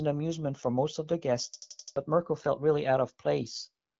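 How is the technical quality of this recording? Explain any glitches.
There's one real glitch here, a system hang loop from about 1.54 to 1.96 s. The system stalled while the audio hardware kept replaying its buffer, so one 85 ms slice repeats five times at about 11.7 Hz, a choppy machine-gun stutter. That fits a 4096-sample buffer, and nearly half a second of speech goes missing. The speech runs through an AMR wideband (HD Voice) codec at 12.65 kbit/s, which leaves only light damage and nothing above about 7.8 kHz.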